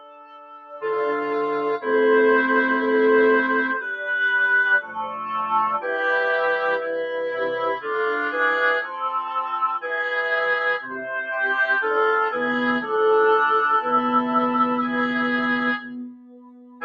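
Noise suppressor applied to music or sounds, throughout: a speech-oriented suppressor treats sustained material as noise, so the level swings by roughly 15 dB, pumping and thinning the sound.

Sound cut by the noise suppressor, at 0.0–0.84 s (about 17 dB down), 4.82–5.24 s (about 10 dB), 9.25–9.55 s and 10.82–11.12 s (about 5 dB each), and from 15.8 s to the end (about 17 dB). Each time, steady or decaying sound is pulled under while sudden onsets pass.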